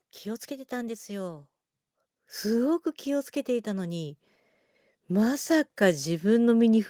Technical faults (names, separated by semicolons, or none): automatic gain rising